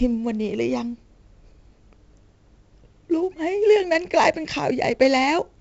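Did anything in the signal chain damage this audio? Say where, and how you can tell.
Yes, it's the codec: 4-bit ADPCM throughout the speech, with gritty hiss riding loud passages, smeared attacks, and nothing above 7.8 kHz, which fits a 16 kHz rate at 64 kbps.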